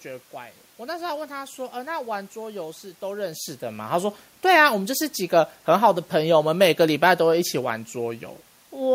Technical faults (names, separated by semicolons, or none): none